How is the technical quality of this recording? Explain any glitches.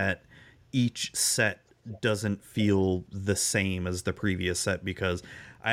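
One glitch stands out. From 1.88 to 1.98 s there is an echo leak: a faint copy of the speech returns 515 ms late. The likely cause is a loudspeaker on the far end whose echo canceller let its microphone pickup through. On a spectrogram it appears as a weak ghost of the earlier harmonics, roughly 25 dB below the speech.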